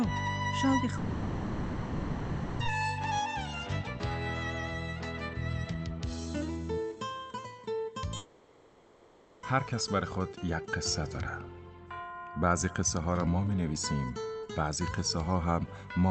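From 0.97 to 2.62 s and from 8.17 to 9.46 s, the audio dissolves into a fading buzz, likely a long network dropout. The receiver fills each gap with the last sound. Unlike a brief packet-loss blip, each lasts over a second, and the audio resumes with that stretch missing.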